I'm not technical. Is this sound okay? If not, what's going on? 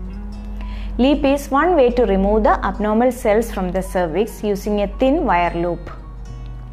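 Yes, this sound is okay. Nothing in it points to a technical problem, so there is nothing going wrong to explain.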